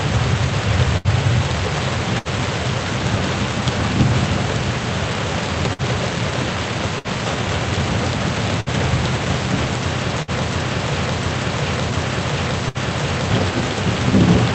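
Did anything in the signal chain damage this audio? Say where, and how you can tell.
Yes, in two places. The first is the network side of the call path: there's a burst of packet loss at 0.97, 2.18, 5.73, 6.99, 8.60, 10.22 and 12.69 s. Each time the sound stalls into a short smeared tail of roughly 55 to 70 ms as the receiver stretches and fades the last thing it had, then jumps ahead with about 60 ms simply gone. The audio is band-limited to around 8 kHz throughout, which fits the call codec.

The second is a broken-record loop from 10.49 to 13.31 s. The same 0.70 s fragment plays back to back, four times, identical each pass, and whatever should have played in those seconds never arrives. That exact repetition points to a buffer that stopped being refilled and kept replaying its last chunk, most likely a stalled player or stream. The loss burst at 12.69 s lands inside that stretch too.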